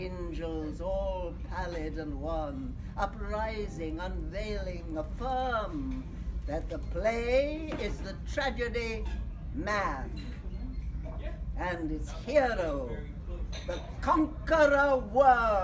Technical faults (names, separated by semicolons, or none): resampler restarted on every block